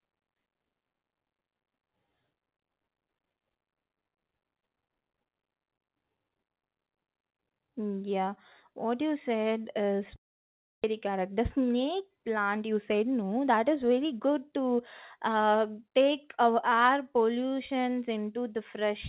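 At 10.16 s, right after "what you said is", the sound smears into a fading buzz and then goes quiet for about 640 ms until 10.86 s. About 400 ms never returns, so this is likely a long network dropout rather than a brief concealed packet loss.

From 10.93 s to 14.27 s, ending before "to uh take our", the audio runs about 7% fast with unchanged pitch. This is a jitter buffer speed-up, trimming roughly 0.3 s of backlog, not a resampling error, which would raise the pitch. The narrowband G.711 path leaves nothing above 4 kHz throughout.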